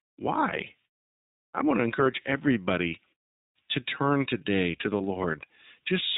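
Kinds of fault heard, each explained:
iLBC codec: The speech was carried by iLBC, a narrowband VoIP codec that codes each short frame on its own, here consistent with a 15.2 kbps mode and 20 ms frames. Nothing above 4 kHz survives, and the voice has a plainly audible rough, synthetic edge.
lost iLBC frames: Two single packets went missing, about 20 ms each, and the decoder covered them by repeating the last pitch cycle mixed with noise. After "I want to" and after "turn today to the", a brief buzzy held vowel appears, then the voice recovers almost at once.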